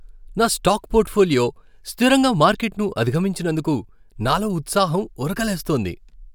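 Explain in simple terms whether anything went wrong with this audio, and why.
Nothing went wrong here.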